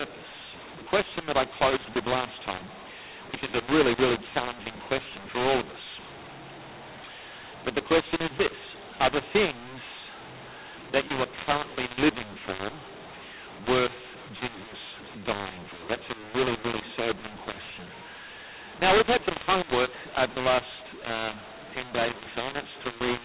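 From start to finish, the speech was coded with G.711 mu-law but decoded as A-law, a mu-law and A-law mix-up. The two logarithmic scales map each 8-bit code to different amplitudes, so levels come out scrambled: some samples too loud, others too quiet, and the quietest lifted well above silence. The telephone-band speech, capped at 4 kHz, sounds harsh and distorted throughout, and the pauses fill with noise instead of falling quiet.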